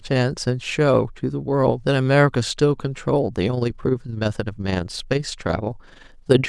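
A speech recording that develops overlap-add ripple from 3.50 s to the end at 6.49 s: the level pulses by about 6 dB roughly 20 times a second, a rough flutter. Unlike codec warble, pitch and tone stay intact; only loudness throbs, locked to the frame rate of a mismatched window overlap.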